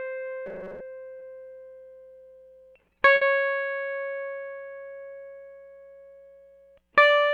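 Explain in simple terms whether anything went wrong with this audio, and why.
From 0.46 to 0.81 s the music turns into a rigid metallic buzz at 188 Hz: robotic sound from repeated short buffers, likely from replaying about 5 ms chunks for roughly half that stretch.

At 1.19 to 1.23 s, short concealed packet loss: a 20 ms hole was patched by extending the preceding sound, leaving a brief smear.

From 3.15 to 3.23 s, a burst of packet loss drops 60 ms of music; the gap is filled with a fading continuation before playback resumes further along.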